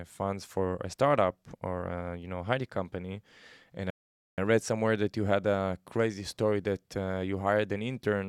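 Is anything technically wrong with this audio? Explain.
Yes, there's a rebuffering stall in this speech clip, running from about 3.90 s to 4.38 s. What happened is the player burned through its downloaded audio and had to sit and wait for more to arrive before carrying on. You hear the speech drop straight into silence, then pick up at exactly the point it left off. Nothing gets skipped, but the pause adds roughly 475 ms to the clip.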